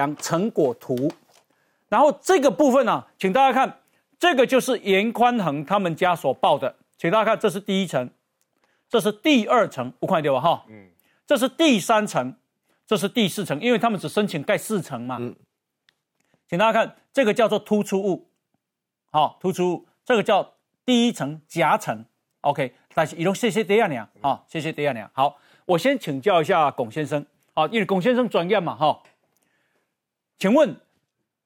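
Recorded speech runs through the whole clip with no audible technical fault anywhere in the signal.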